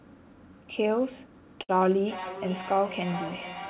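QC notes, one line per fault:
1.62 to 1.71 s, short stall from a late packet: the sound at this point is held for about 68 ms, with a slight buzz or dip, and then carries on from exactly where it stopped. A packet arrived late, the jitter buffer ran dry, and the receiver stretched the last sound to cover the gap. Unlike a dropout or concealed loss, nothing is skipped. Everything after it simply sits about 68 ms later.
1.85 s to the end, feedback echo between two devices: each stretch of speech comes back at a steady interval of roughly 0.4 s, thinner and more ringing on each pass, with the loudest return about 12 dB below the direct speech. A second device in the room is replaying what this microphone sent, and this microphone captures it again. Each echo canceller removes only its own device's playback, so the repeat survives. A room reflection would arrive within tens of milliseconds and would not come round again. 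These repeats keep their fixed spacing, and like the direct sound they have nothing above 4 kHz, the band limit of the call path, which points to G.711 mu-law at 64 kbps.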